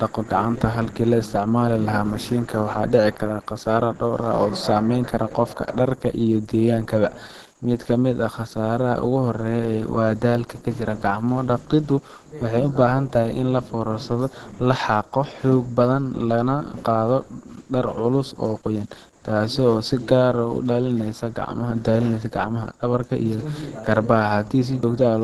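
A speech recording with Opus compression damage throughout: the sound is plainly muffled and hoarse, likely from Opus running in its hybrid speech mode at a low bitrate, which fits about 16 kbps. A spectrogram shows a flat ceiling with nothing above 12.1 kHz.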